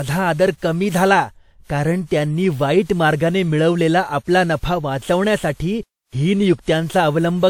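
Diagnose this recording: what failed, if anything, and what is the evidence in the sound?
Generation loss throughout the speech, at the codec stage: swirly, hollow sound with blurred attacks and nothing above 19.2 kHz, likely from about seven WMA re-encodes, each requantising on a shifted frame grid.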